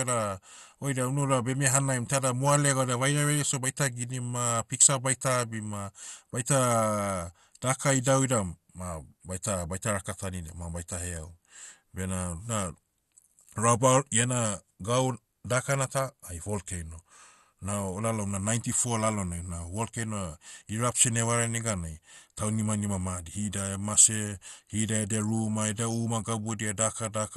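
Throughout the speech, the sound is dull and gurgling. Nothing reaches above 12.2 kHz. The damage is plainly audible. The speech carries a granular, watery texture that shifts from moment to moment. The likely cause is MP2 compression at a rate around 64 kbps. Starved of bits, the encoder shuts off its upper sub-bands, and some bands flicker in and out. The bands that remain are coarsely quantised, which gives the grainy distortion.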